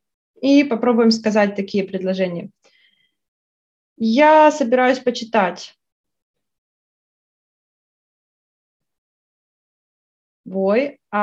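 No technical faults can be heard anywhere in this clip.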